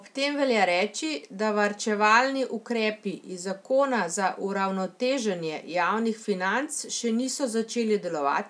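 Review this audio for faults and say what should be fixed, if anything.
No faults found; nothing needs fixing.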